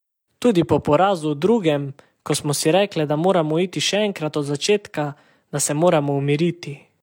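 Nothing in this speech recording stood out as a technical problem on listening.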